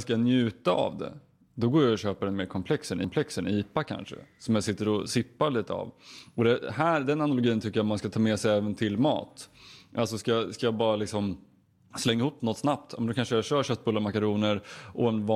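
At about 3.04 s the speech stutters: a stretch running to 3.51 s, roughly 0.46 s long, plays through once and then plays again, a clear case of repeated frames. A run of compressed frames got written or delivered twice, so the decoder just replayed that same block. The length fits a handful of frames. You hear it as a jump back, and the clip ends up 464 ms longer.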